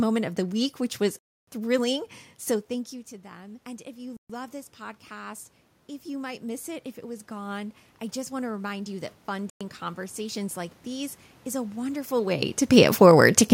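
At 1.19 s the speech cuts to silence for 287 ms, then resumes at 1.48 s. This is a Bluetooth stall, likely caused by interference holding packets back until the headphones' buffer ran empty.

From 2.69 s to 5.52 s, voice and room noise swell together by about 6 dB. Just before this, the talker shifts position around 2.5 s. The swell is automatic gain rising: the input had fallen by about 19 dB, and the gain control slowly raised its gain to make up for it.

Within that rise, a 128 ms dropout at 4.17 s is likely another stall. The same gradual lift returns from 6.04 s to 12.17 s, climbing about 8 dB, and it ends near a second change in the talker's position around 12 s. In the middle of it, a 110 ms silence at 9.50 s is a third Bluetooth stall, likely with the same cause.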